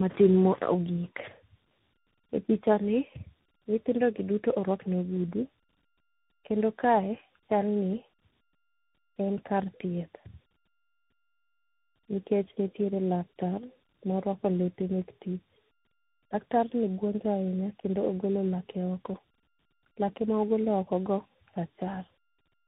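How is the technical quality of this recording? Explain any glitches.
The recording is degraded throughout by tandem speech coding.

Across the whole clip, the speech passes through three speech codecs in a row. The sound fits a CVSD link, then AMR-NB at about 7.95 kbit/s, then CVSD again, with G.711 A-law hops in between. Each coder re-encodes the previous one's errors, so the damage compounds. The speech sounds rough, muffled and warbly. On a spectrogram, nothing appears above 3.8 kHz, and the harmonics look smeared and grainy.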